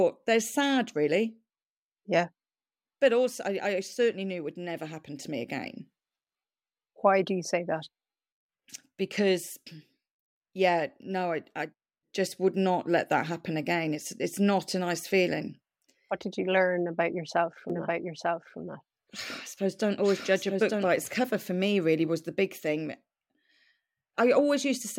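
From 17.70 to 20.88 s, a doubled audio track: the speech repeats about a second later, roughly 5 dB quieter, likely from a second capture path, showing as offset duplicate spectrogram patterns with abrupt edges.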